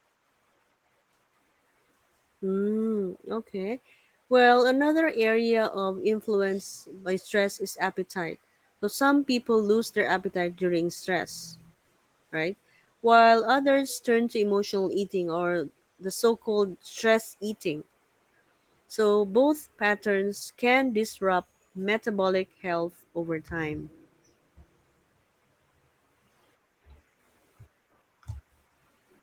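No technical faults are audible.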